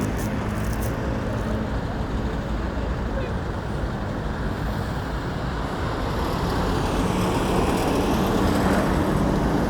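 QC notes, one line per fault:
No faults found in this recording of sounds. Nothing here needs a QC entry.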